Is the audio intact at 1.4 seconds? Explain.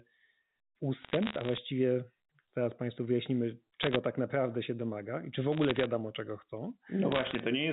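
No. Bit errors on a digital phone line hit from 1.02 to 1.58 seconds. Scattered flipped bits in the G.711 A-law stream corrupt single samples. Where a sign or high bit flips, a sharp tick results, and together they make crackle over the speech.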